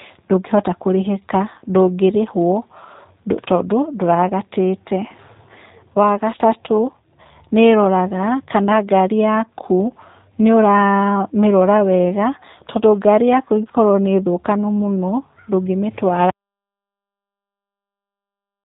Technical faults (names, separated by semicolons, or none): G.729 codec